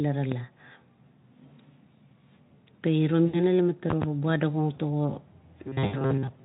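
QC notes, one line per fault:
0.32 s and 3.90–4.05 s, loud pop: a single sharp pop, then a quick double pop, each some 15 dB above the speech, which carries on underneath. This is likely a sudden voltage step or pulse, from a plug, switch, static or driver glitch, added to the signal.
3.25–3.41 s and 5.85–6.01 s, VoIP packet loss concealed by the speech codec: each gap is 80 ms, which fits four lost 20 ms frames. The Speex decoder, otherwise clean, extends its last pitch and filter with falling gain, so the voice turns into a fading buzzy smear.
5.67 s to the end, robotic sound from repeated short buffers: the speech becomes a rigid metallic buzz at 134 Hz, which points to a buffer of about 7.5 ms being replayed. Most of this stretch is likely repeats filling in for audio that arrives too late, so the real audio is skipped.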